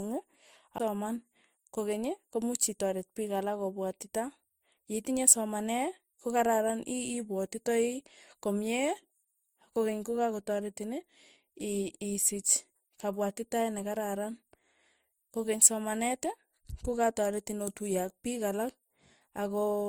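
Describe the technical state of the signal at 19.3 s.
At 19.3 s the speech carries the smeared, layered artefacts heard throughout, most likely from transcoding between lossy codecs, an MP3-type encode followed by Opus, each stacking its own distortion. A spectrogram shows grainy, blurred high bands and nothing above 20.2 kHz.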